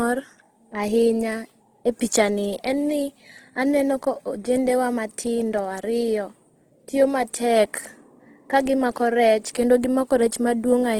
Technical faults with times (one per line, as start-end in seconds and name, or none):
0.00-10.99 Opus compression